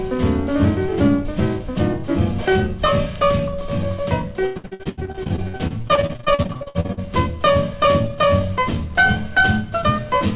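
From 4.46 to 7.06 s, repeated packet loss (robotic sound): dozens of short holes, the longest 94 ms, each patched by extending the previous sound, so nearly half the span is filled in. Unlike a single dropout, the rapid, repeated patching makes the audio choppy, with pieces missing.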